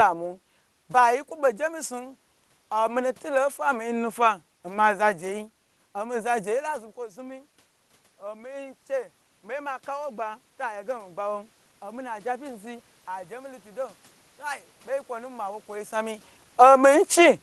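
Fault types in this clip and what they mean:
Automatic gain rising: the gain control judged the input too quiet and slowly raised it by about 10 dB from 5.29 s to 17.08 s, lifting speech and room noise together.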